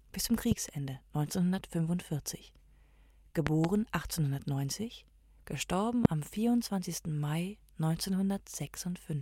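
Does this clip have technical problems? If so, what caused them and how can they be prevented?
Yes. Loud pops at 0.52–0.54 s, a double pop at 3.47–3.67 s, and one at 6.05–6.08 s, roughly 15–25 dB above the sound. These are likely voltage spikes from a plug, switch or static. Each shows as a tall spike on the waveform and a thin full-height vertical line on the spectrogram. Secure connectors, mute before switching, and ground equipment.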